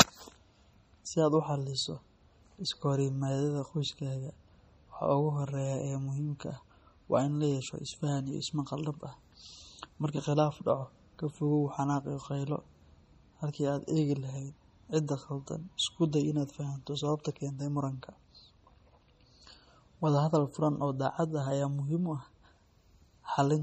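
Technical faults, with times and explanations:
Throughout, MP3 compression: the speech sounds watery and swirly, with chirpy s sounds, smeared attacks and nothing above 15.5 kHz, likely from heavy MP3 encoding at a rate that fits 32 kbps. Weak frequency lines flicker between frames, which a plain low-pass filter would never cause.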